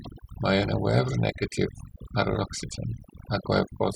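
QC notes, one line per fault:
Throughout: overdone noise removal. The noise reduction on this speech was set far too aggressively, so any frequency band that drifts close to its noise estimate is pulled right down or switched off. The background drops and breaks up into small twinkling specks, and the quieter parts of the speech are cut away along with the noise.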